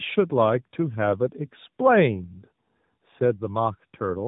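From start to finish the speech sounds rough, muffled and warbly, with nothing above 3.8 kHz. This is tandem speech coding: the sound points to an AMR-NB coder, a mu-law G.711 link, then AMR-NB again, each stage re-coding the previous one's damage.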